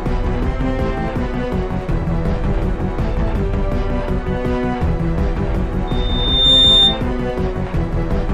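A microphone was picking up the loudspeaker it was feeding, and at one frequency the loop gain rose above unity, so from 5.87 s to 7.02 s the clip carries a loudspeaker feedback squeal. A pure tone at 3.6 kHz appears and swells over roughly three quarters of a second until it sits around 10 dB above the rest of the sound. It then holds as a piercing whistle and stops at 7.02 s.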